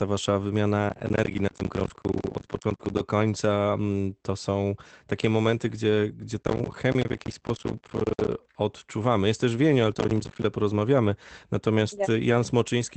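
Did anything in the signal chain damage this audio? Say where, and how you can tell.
Yes. Processor overload crackle, from the driver or buffer stage, runs from 0.89 to 3.0 s, 6.43 to 8.32 s and 9.95 to 10.44 s. Buffers of around 10 ms keep arriving late and drop to silence, giving gritty tearing rather than the isolated smears of network loss.

Short concealed packet loss, from the network stage, appears at 2.75 to 2.81 s (40 ms) and 6.99 to 7.03 s (20 ms). The receiver extends the preceding sound to cover the hole, so it smears or wobbles briefly instead of dropping to the hard silence of an overload gap.

A lost packet rebuilt from error correction is heard at 2.79 to 2.81 s, 7.01 to 7.03 s and 11.97 to 11.99 s. Each time, one 20 ms Opus frame is decoded from the low-bitrate copy carried in the next packet, so there is no gap, only a rougher, noisier stretch.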